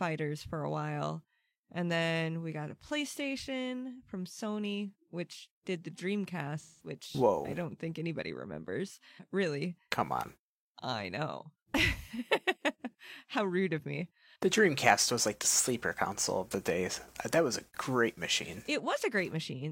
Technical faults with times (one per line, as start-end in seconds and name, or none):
6.61-6.93 AAC frame loss with concealment